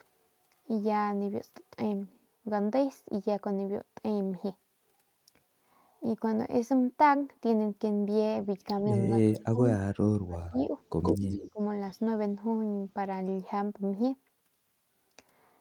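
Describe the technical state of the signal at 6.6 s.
At 6.6 s the audio is intact, with nothing in the signal pointing to a technical fault at that moment.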